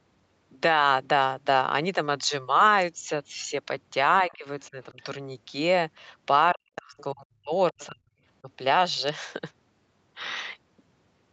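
Speech, with speech suppressed in double talk at 4.26–4.46, 4.71–4.99, 6.53–7.52, 7.71–8.06 and 8.42–8.48 s. The waveform visibly dips, by roughly 10 dB in the shallow cuts and as much as 40 dB in the deep ones, where the spectrogram nearly blanks. This is likely an echo canceller ducking the talker while both sides spoke. The other side's voice is leaking through as faint scraps at 4.30–4.35, 6.99–7.04 and 7.79–7.86 s, some 25–35 dB below the speech. These show as isolated smudges inside the suppressed gaps, likely loudspeaker echo the canceller left behind. The call's microphone processing shows nothing above 8 kHz.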